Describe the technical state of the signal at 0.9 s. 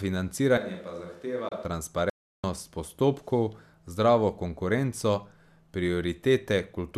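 At 0.9 s the speech is in a switch to a distant microphone, lasting from 0.58 to 1.65 s. The sound abruptly turns roomy and hollow, with thinner bass, a level roughly 10 dB lower, and room noise sitting about 30 dB below the speech. The likely cause is that the close microphone dropped out and a farther pickup took over. Unlike plain muffling or added reverb, both edges are sudden and the background noise floor rises along with the room sound.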